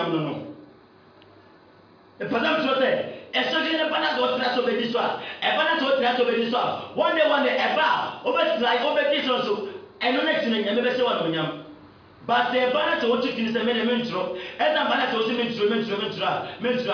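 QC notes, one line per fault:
No faults found. Nothing in the audio calls for a QC entry.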